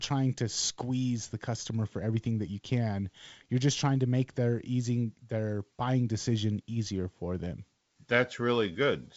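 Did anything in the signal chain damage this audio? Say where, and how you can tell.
No, nothing here is damaged; the speech just carries the ordinary signature of G.722 wideband telephone coding, with the band stopping around 7.7 kHz, a faint hiss up top, and a little extra noise in the lower band from the 56 kbit/s mode, which is how that path normally sounds.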